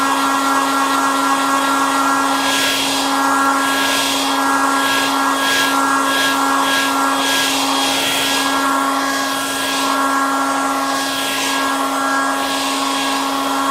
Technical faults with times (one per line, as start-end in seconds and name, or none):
3.46 bit error spike
8.18 bit error spike